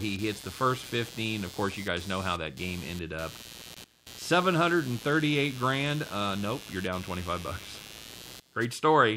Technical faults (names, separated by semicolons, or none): computer activity noise